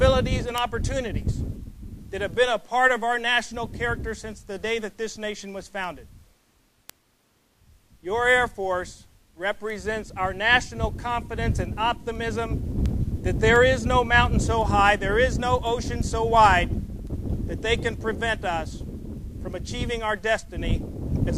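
Sharp ticks of uneven strength run through the audio at a steady pace, roughly every 0.4 s, from 0.23 s to 21.29 s, around 70 in all. These are word clock ticks: the digital link was read by a device running on its own clock rather than locked to the sender's, and the two clocks drifted apart by something like 70 ppm. Each time they slid past each other, a few samples were misread and one sample was dropped or repeated.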